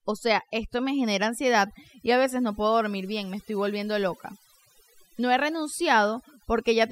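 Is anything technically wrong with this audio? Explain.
Yes. Throughout the speech, the background drops to near silence scattered with twinkling specks. That is overdone noise removal: the reduction was set too strong, shutting off individual frequency bands near the estimated noise floor and taking quiet parts of the voice with them.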